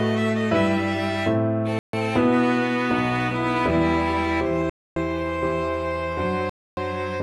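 Three dropouts break the audio: at 1.79 s for 143 ms, at 4.70 s for 267 ms, and at 6.50 s for 275 ms. Each falls to silence, a flat line on the waveform and a blank vertical band across every frequency on a spectrogram, then resumes abruptly. These are likely Bluetooth stalls, where delayed packets let the receiver's buffer run empty.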